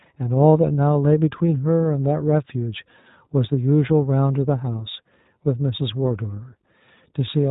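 Throughout, the sound carries plainly audible iLBC codec damage: nothing above 4 kHz, and a slightly rough, synthetic texture from coding each frame's excitation independently. The character fits the 15.2 kbps, 20 ms frame mode of this narrowband VoIP codec.

At 1.47 s there are lost iLBC frames, a gap of about 20 ms consistent with a single dropped frame. The decoder fills it by repeating the last pitch cycle mixed with noise, heard as a brief buzzy, held vowel before the speech recovers immediately.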